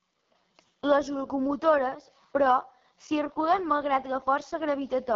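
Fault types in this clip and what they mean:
AMR wideband (HD Voice) codec: the speech runs through this codec for the whole clip at its lowest rate, 6.6 kbit/s, where the pulse-driven vocal tract model is starved of bits, leaving the voice rough and raspy, with heavy damage and nothing above about 7.2 kHz.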